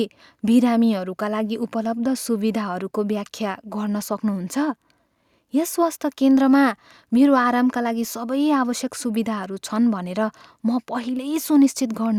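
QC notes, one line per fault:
No faults detected.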